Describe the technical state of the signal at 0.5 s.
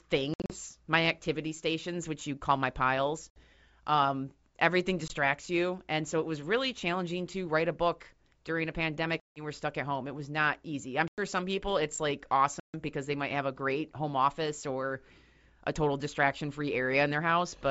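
At 0.5 s the signal sits inside a burst of packet loss on an ADPCM call running from 0.34 to 0.55 s, where about 120 ms of audio, in around seven packets, drops out across 160 ms, the longest gap lasting 60 ms. The missing packets become abrupt silences. Because the G.722 decoder's predictor and step size lose track of the sender's, the speech resumes slightly distorted. A waveform shows square-edged flat gaps, and a spectrogram shows vertical blank stripes.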